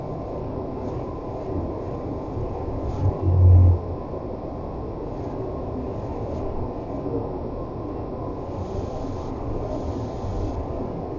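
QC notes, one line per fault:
Throughout, wrong sample rate: the speech drags at roughly a third of its proper speed and sits about 17.6 semitones low, deep and slurred. Pitch and tempo fall together, pointing to 44.1 kHz audio played back at 16 kHz without conversion.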